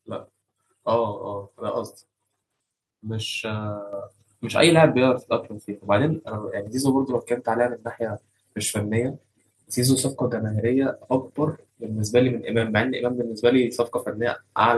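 At 3.93 s the microphone volume stepped up by about 7 dB in one jump. Speech and background get louder together, and the waveform envelope widens abruptly at that instant.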